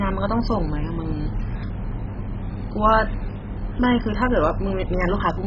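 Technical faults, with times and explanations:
Throughout, MP2 compression: the speech sounds dull, with nothing above 7.5 kHz, plus a heavy gurgling, grainy texture as bands flicker in and out. It's likely MPEG Layer II starved of bits, around 16 kbps, so upper sub-bands drop out and the rest are coarsely quantised.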